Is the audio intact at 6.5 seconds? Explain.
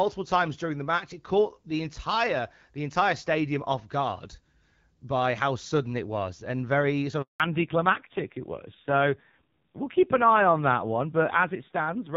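Yes, at 6.5 seconds the speech comes through intact, with no dropout, click or other fault at that moment.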